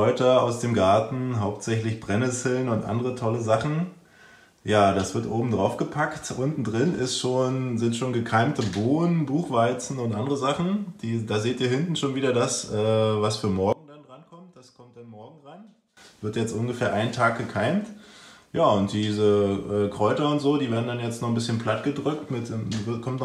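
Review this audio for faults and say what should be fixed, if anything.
From 13.73 to 15.97 s, one channel was likely inverted; summing cancels the shared centre, dropping the sound about 22 dB to a faint residue. Check channel polarity and monitor a mono fold-down during mixing so any inversion is caught before export.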